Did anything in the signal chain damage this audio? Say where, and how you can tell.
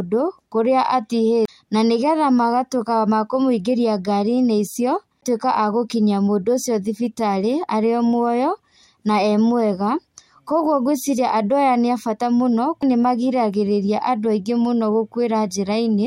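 Yes, CD skips during playback: ticks and brief mutes at 1.45–1.48 s, 5.21 s and 12.82 s. The sound then resumes from a different point on the disc, not from where it left off, unlike a simple dropout.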